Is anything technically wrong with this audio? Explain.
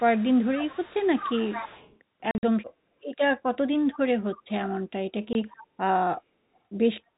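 Yes. Three kinds of fault are audible in this telephone-band speech, which sits below 4 kHz as G.711 coding would.

Speech suppressed in double talk, 0.0 to 0.14 s: the echo canceller likely mistook the talker for loudspeaker echo while both sides were active, and pulled its gain down to stay safe. The voice sinks by about 25 dB at its deepest, a brief hollow dip of about 150 ms right at the start before the level recovers.

Echo leak, 0.0 to 1.98 s, 4.32 to 4.51 s and 5.52 to 5.64 s: the far end's echo canceller likely failed to remove everything its microphone caught from its loudspeaker, so a residue travelled back. That residue sounds like a faint second copy trailing the speech by 191 ms. It is about 15 dB below the voice through the first two seconds, and about 25 dB below in the two short later scraps.

Packet loss filled with silence, 2.31 to 2.43 s and at 5.33 s: lost packets were replaced with nothing, leaving gaps of silence with abrupt edges. 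In the first stretch, 90 ms go missing across 120 ms, in holes up to 50 ms long. The second is a single 20 ms hole. The sizes fit 10 ms packets.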